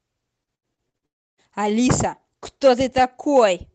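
From 0.43 to 1.05 s, repeated packet loss keeps interrupting the stream: five gaps, the longest 75 ms, are patched by stretching the preceding sound, so over a third of that span is synthetic fill. The speech turns choppy and robotic, with pieces missing.

From 1.06 to 1.40 s, the audio stops for about a third of a second, leaving near-silence after a brief smeared tail, before resuming without the lost portion. A long network dropout is the likely cause, with the receiver briefly extending the last sound before giving up.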